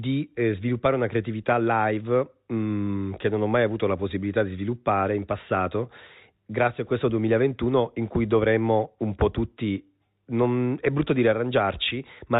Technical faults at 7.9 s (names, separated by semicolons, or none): none